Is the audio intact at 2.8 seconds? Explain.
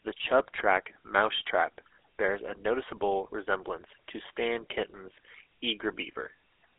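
No, at 2.8 s the speech carries the GSM full-rate codec, present for the whole clip. The coder rebuilds speech from a vocal-tract model driven by sparse, regularly spaced pulses, which fits a 13 kbps rate. That gives a plainly audible buzzy, gravelly roughness, with a narrow phone band of roughly 250 Hz to 3.5 kHz and nothing above 3.8 kHz.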